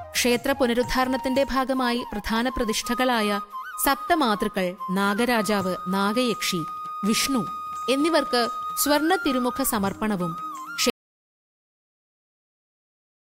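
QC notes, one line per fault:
10.9 s to end, audio dropout to silence: at 10.9 s the sound cuts off abruptly, mid-flow, and from there to the end of the clip the file holds silence, with no room tone or noise floor underneath. That dead-flat gap is the giveaway. The input was likely lost, through a disconnected source or a link failure, while the recorder kept writing silence. Whatever occurred in those final 2.5 s was never captured.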